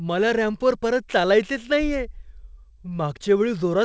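No technical faults are audible.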